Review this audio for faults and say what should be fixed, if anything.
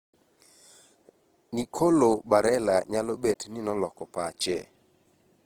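Throughout the clip, the speech has likely been squeezed through Opus compression in its music-oriented CELT mode at too low a bitrate, plausibly around 16 kbps. Each band keeps its overall energy, but with so few bits the fine detail is rebuilt by copying lower bands or injecting noise, so the full-width spectrum survives while the voice turns grainy and rough and tonal parts take on a noisy edge. The damage is plainly audible. To prevent it, encode at a higher bitrate or keep the original uncompressed recording.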